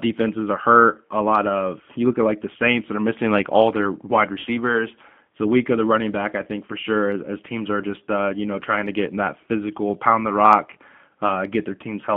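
From the very start the whole speech clip runs through a G.729 codec, and the damage is easy to hear. The line only carries roughly 150 Hz to 3.5 kHz, so everything sounds boxed-in and thin, with no air on top. The rough, slightly synthetic edge comes from the decoder rebuilding the voice from a filter, a pitch guess and a handful of pulses per frame, which points to the 8 kbit/s G.729A flavour.

Then at 4.39 s, running to about 4.49 s, there's VoIP packet loss concealed by the speech codec. Around 60 ms went missing, which fits three 20 ms packets dropping out. With nothing arriving, the decoder keeps replaying its last pitch and filter at falling gain, so you get a short buzzy tone or coloured noise that sags away. Because each frame leans on the one before, the voice stays a bit weak and off for a moment after the audio returns.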